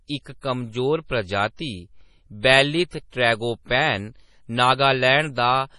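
Throughout, the speech sounds watery and swirly, with smeared attacks and nothing above 11.2 kHz. That points to heavy MP3 compression, likely at a low bitrate around 32 kbps, where the encoder cuts the treble and drops weak frequency detail that flickers between frames.

Pre-echo appears as a brief hiss just ahead of sharp onsets at 0.41 to 0.43 s (about 25 ms), at 1.56 to 1.59 s right after "इक कमजोर", at 2.41 to 2.45 s just before "बेलीथ ट्रैगोपैन" (39 ms), and at 3.10 to 3.12 s. In each case the codec spread noise meant for the attack back across the quiet moment before it.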